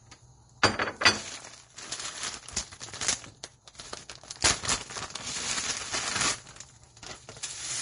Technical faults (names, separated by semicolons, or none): Vorbis compression; pre-echo